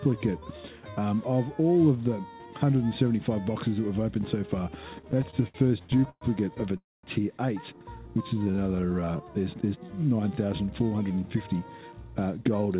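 From 5.02 to 6.23 s the audio suffers repeated stalls (stutter): over a dozen short hold-ups, the longest about 118 ms, together filling roughly a quarter of that stretch. Packets kept arriving late, the receiver's buffer kept running dry, and each time the last sound was extended until data resumed. Nothing is lost, but the sound drags and hiccups. Unlike a single freeze, these are many brief catches strung closely together rather than one clear break.

At 6.77 s comes a call audio freeze lasting about 0.26 s, most of which, about 210 ms, is plain silence before the sound picks up exactly where it stopped. This is a single, distinct pause with no content missing, consistent with packets likely being held up in transit long enough to empty the buffer. The continuation fades out quickly, and there is no rapid series of catches as in the stutter just before.

Between 8.06 and 9.19 s a jitter buffer slow-down stretches the audio to about 84% speed, adding roughly 186 ms. 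The receiver rebuilt its reserve by repeating tiny pitch-length fragments many times over, so sounds are drawn out while the pitch stays put. Unlike a freeze, nothing stops. The flow simply runs slower, which sets it apart from tape-style slowing, where the pitch would drop.

From 10.94 s to near the end, a jitter buffer speed-up runs the audio at about 109% speed, trimming roughly 150 ms in total. With too much audio queued, the receiver cut short pitch-length slices repeatedly to reduce delay, so the sound feels hurried at unchanged pitch. This is the mirror of the earlier slow-down. It is continuous compression rather than a jump or dropout, and nothing above 4 kHz is present, matching the 64 kbps G.711 A-law call path.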